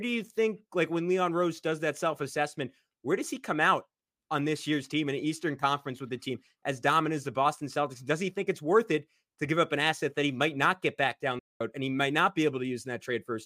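At 11.39 s the speech cuts to silence in mid-flow. It resumes at 11.61 s, after a gap of about 211 ms. This is a playback stall. The player likely ran short of data or had its thread blocked, so output halted until it recovered.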